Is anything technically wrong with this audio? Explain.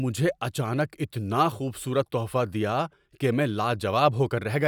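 No, nothing technically wrong can be heard in this speech recording. There are no faults to point to or explain.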